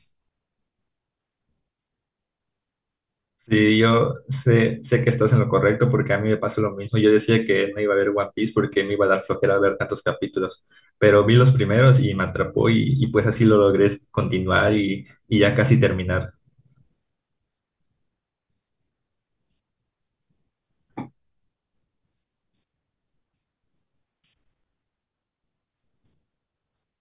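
Nothing is technically wrong with this speech recording.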